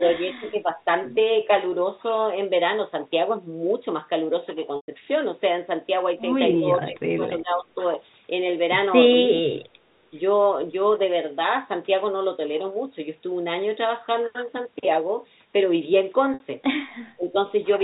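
It's a speech recording over a G.711 telephone line, so everything tops out at 4 kHz. The voice dips at 0 to 0.86 s, 6.6 to 7.66 s, 9.27 to 9.77 s and 17.16 to 17.36 s, by roughly 10 to 15 dB and once by around 30 dB. That's most likely speech suppressed in double talk, with the echo canceller ducking the talker while the far end spoke. At 4.76 s (120 ms) and 16.34 s (60 ms) there's packet loss with pitch repetition: a held, buzzy note that fades out before the speech cross-fades back in, which fits runs of 20 ms packets.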